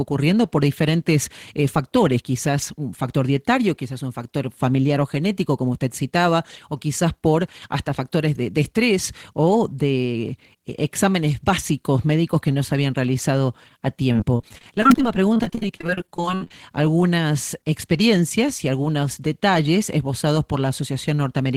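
From 14.12 to 16.51 s the speech turns choppy and robotic, with pieces missing. This is repeated packet loss: dozens of brief dropouts, the longest 59 ms, are each patched by extending the previous sound, concealing about 29% of the stretch.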